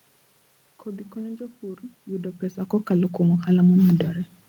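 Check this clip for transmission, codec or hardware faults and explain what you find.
No transmission, codec or hardware faults.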